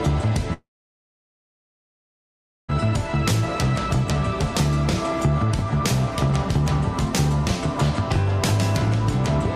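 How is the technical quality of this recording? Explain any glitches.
The recording has one clear glitch. From 0.53 to 2.75 s the sound fades into a brief buzz and then silence, resuming with about 2.2 s lost, likely a long network dropout.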